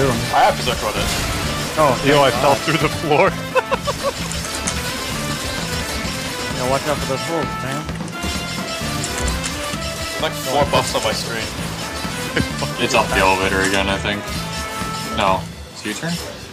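No technical faults can be heard anywhere in this audio.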